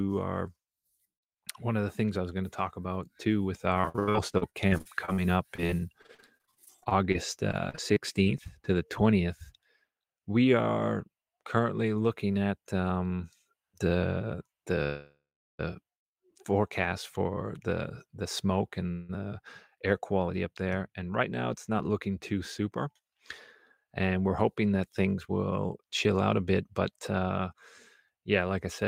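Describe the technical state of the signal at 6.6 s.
At 6.6 s the speech sounds choppy and robotic, with clipped fragments. This is repeated packet loss from 3.81 to 8.47 s, between "talk about too with" and "to the": dozens of short gaps, up to 79 ms, each patched by extending the preceding sound.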